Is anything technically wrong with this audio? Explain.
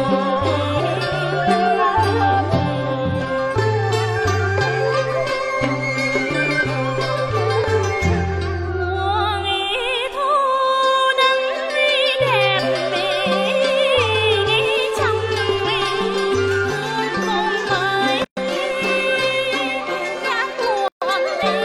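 Yes, there are two gaps at a join of encoded pieces: 18.24 to 18.37 s (about 124 ms) and 20.88 to 21.02 s (about 136 ms). The sound drops out, then carries on where it stopped, because separately encoded chunks were joined with their padding still in.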